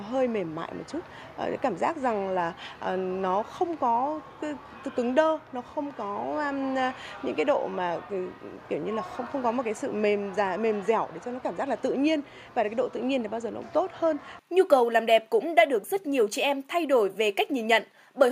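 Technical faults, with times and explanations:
No technical faults are audible.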